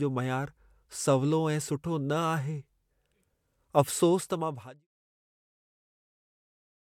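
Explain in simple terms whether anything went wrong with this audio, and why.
Nothing went wrong with this audio: the speech fades out gently from around 4 seconds until about 4.88 seconds, which is a normal, deliberate editing touch.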